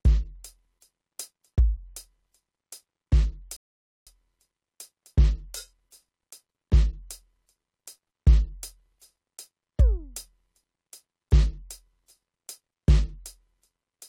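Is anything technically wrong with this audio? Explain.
Yes, the music has one rebuffering stall. At 3.57 s playback halts for about 0.5 s, until 4.07 s, because the player exhausted its downloaded audio and waited for more. The music drops to dead silence, then picks up exactly where it stopped, with nothing skipped but half a second added. On a waveform this is a flat, near-silent gap; on a spectrogram, a blank vertical band across all frequencies.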